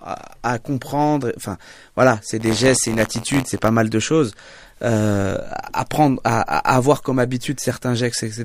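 From 2.39 to 3.70 s, between "voilà c'est" and "mal de choses", buffer tearing causes a robotic 86.1 Hz buzz, fitting a 512-sample buffer. A small slice of each buffer replays audio about 20 ms old, leaving hard waveform steps and evenly spaced vertical spectrogram lines.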